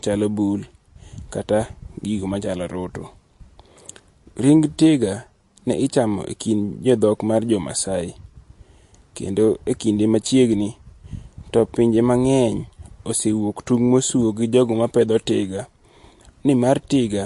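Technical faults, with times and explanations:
Throughout, MP3 compression: the encoder likely ran short of bits, at a rate that fits roughly 48 kbps, so it cut everything above 11.3 kHz and dropped weak frequency lines that then flicker on and off from frame to frame. The speech sounds dull at the top and plainly watery and swirly, with metallic chirps on s sounds and consonant attacks smeared rather than crisp.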